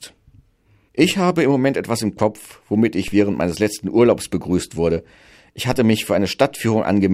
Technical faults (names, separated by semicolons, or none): DC step